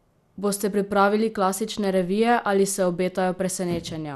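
Across the whole speech clip there is MP2 compression damage, and it is plainly audible. Nothing is left above about 12.2 kHz, so the top end sounds dull and closed in. The remaining bands have a gurgling, granular roughness. This likely comes from MPEG Layer II coding at too low a rate, around 80 kbps. The coder ran short of bits. It shut off the upper sub-bands and quantised the rest coarsely.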